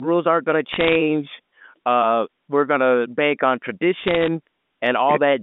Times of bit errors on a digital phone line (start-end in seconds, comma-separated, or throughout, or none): 0.73-0.96, 4.01-4.28